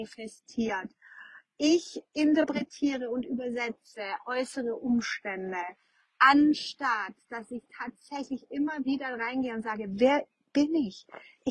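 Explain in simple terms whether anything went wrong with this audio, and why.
Nothing went wrong here: no audible fault turns up anywhere in the recording.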